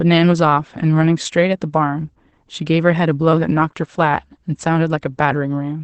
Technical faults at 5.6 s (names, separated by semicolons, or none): Opus voice compression